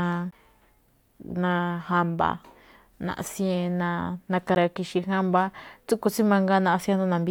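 At 0.31 s and again at 4.55 s the speech hits a CD skip: the laser jumps to another turn of the spiral, so after a very short mute you hear a tick or short gap and the playback picks up from a different spot on the disc.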